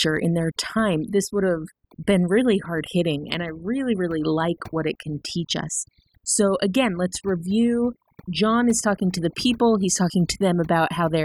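From start to finish the speech carries overdone noise removal. A noise reduction stage was pushed so hard that any frequency band sitting close to its noise estimate gets pulled down or cut out, and quieter parts of the voice are caught along with the noise. Between phrases the background drops to near silence scattered with twinkling specks. A spectrogram shows isolated bright dots in otherwise empty gaps and holes chewed through the speech harmonics.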